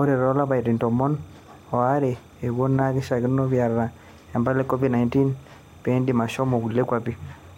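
Timecode bleed runs through the whole speech clip. Linear timecode from a nearby track or cable has leaked into the audio. Its square wave flips between pitches near 1 and 2 kHz. This gives a steady chirping warble, well below the speech, with a pattern that fits 30-frame code.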